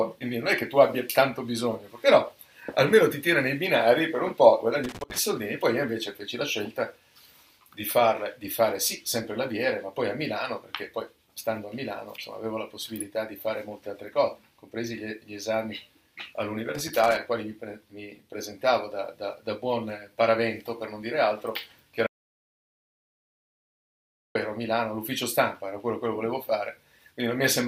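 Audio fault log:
4.84–5.19 s and 16.75–17.17 s: loose connector crackle. Two irregular bursts of scratchy crackle, each roughly 0.35 to 0.4 s long, where a worn or dirty contact keeps making and breaking. The signal is chopped rather than dropping out, unlike a clean gap.
22.07–24.35 s: audio dropout to silence. The sound stops abruptly for about 2.29 s and then resumes mid-flow. The gap is silent with no room tone at all, which sets it apart from a fade. The likely cause is a lost input while recording continued.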